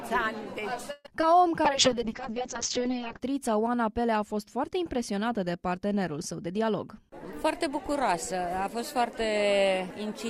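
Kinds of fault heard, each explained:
Call audio freeze: From 0.91 to 1.07 s the sound stalls. The last bit gets stretched into a fading buzz that dips to silence for about 10 ms, and then the audio picks up where it left off. Roughly 0.13 s of filler goes in and nothing is lost, so everything after it runs about 132 ms later. The likely cause is packets held up in transit, which let the jitter buffer run dry.
Short concealed packet loss: Around 1.21 to 1.24 s there's a tiny smear where about 20 ms of audio never made it to the decoder in time. The receiver patched roughly 18 ms of it by carrying on the preceding sound, then blended back into the real signal. You hear a quick wobble more than a gap.
Call bitrate drop: From 1.66 to 3.26 s the encoder gets squeezed from 48 kbps down to 6 kbps after the bandwidth estimate collapsed, and it sits at the bottom for about 1.5 s. At that rate Opus codes everything coarsely and pulls the audio bandwidth in from 20 kHz to 8 kHz. 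The result is a rough, watery, muffled stretch that clears once the bits come back.
Jitter buffer speed-up: From 6.46 to 9.31 s the buffer was holding more audio than it wanted, so the receiver trimmed it back. It snipped out small pitch-period-sized chunks over and over, around 150 ms in total. Playback runs about 4% fast with the pitch unchanged.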